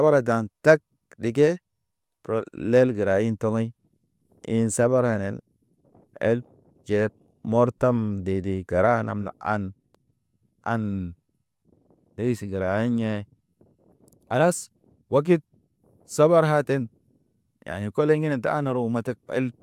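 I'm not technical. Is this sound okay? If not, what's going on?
Yes, nothing wrong turns up anywhere in this speech recording.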